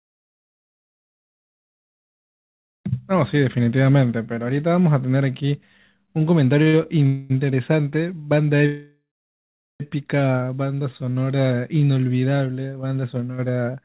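Speech carried over a call path whose audio has nothing above 4 kHz, which fits G.711 mu-law telephony coding. Two back-to-back short stalls from a late packet come at 6.62 to 6.68 s and 6.68 to 6.75 s. Each time a packet missed its slot, the jitter buffer ran dry and the receiver held the last sound for 38 ms and then 51 ms, so the speech drags with a faint buzz but loses nothing. A call audio freeze follows at 7.06 to 7.32 s, where 236 ms of stretched sound fills the gap without going silent. A longer one runs from 8.66 to 9.82 s, where 1141 ms is inserted and the filler fades into about 770 ms of silence before the speech resumes where it stopped. The likely cause is packets held up in transit and then delivered late. A jitter buffer slow-down at 10.68 to 11.25 s plays the speech at 87% speed, adding 82 ms by repeating pitch periods to rebuild the buffer's reserve, so sounds are drawn out at unchanged pitch. 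A jitter buffer speed-up at 13.46 to 13.83 s does the reverse at 110% speed, trimming about 50 ms of pitch periods to shed excess delay, which makes the ending sound hurried.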